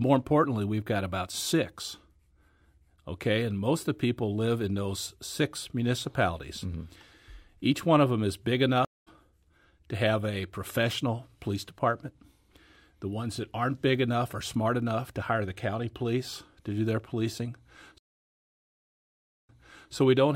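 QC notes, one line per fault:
8.85–9.08 s, stream reconnect: right after "of them is big" the sound drops out for 217 ms, then picks up about a fifth of a second further on, so a small piece is skipped. The connection broke and a fresh decoder joined the live stream mid-way. On the waveform this shows as a flat line followed by a soft, ramped onset; the spectrogram shows a clean vertical blank band across all frequencies.
17.98–19.92 s, stream reconnect: a longer dropout of about 1.5 s, after which playback resumes 441 ms earlier than where it stopped, so that stretch is heard twice because the server resent buffered audio on reconnecting. The waveform shows a wide flat gap, then a muted or fading-in first frame. On the spectrogram, the pattern just before the gap reappears immediately after it.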